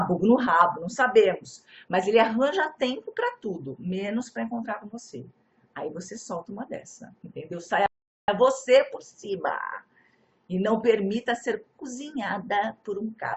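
One channel drops out at 0.47 s and stays lost to the end: the level falls abruptly by about 6 dB. This is likely a stereo channel going missing before the mono sum, halving what both sides shared.

A rebuffering stall runs from 7.86 s to 8.28 s, when playback ran out of downloaded audio and waited for more. The sound cuts to silence for about 0.42 s, then picks up exactly where it stopped, so nothing is skipped but time is added.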